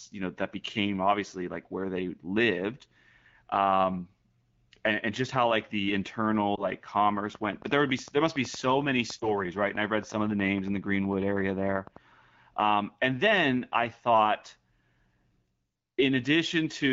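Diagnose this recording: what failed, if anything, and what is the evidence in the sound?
Lost AMR speech frames at 6.55 s and again at 9.19 s, a network-stage fault on the radio link. Each event is a brief dip or warble lasting about 0.1 s, which fits a single corrupted 20 ms frame. The AMR-WB decoder, running at 12.65 kbit/s with only light coding damage, rejected the damaged frame and filled the gap by extrapolating the previous pitch and vocal-tract parameters at reduced gain. The speech then recovers, briefly weak or rough.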